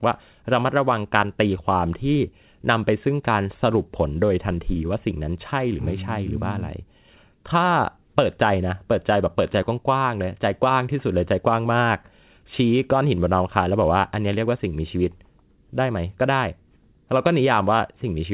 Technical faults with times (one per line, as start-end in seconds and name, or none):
none